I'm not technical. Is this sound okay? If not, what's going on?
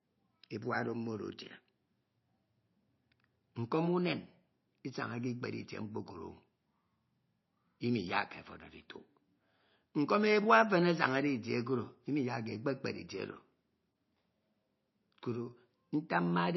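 No. MP3 compression throughout: the speech sounds dull and watery, with nothing above 5.8 kHz, likely because it was squeezed into too little data.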